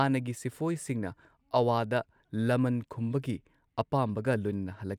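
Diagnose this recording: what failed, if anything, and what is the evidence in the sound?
Nothing here points to a failure at any stage; the speech runs along steadily with no dropouts, clicks, distortion or glitches to track down.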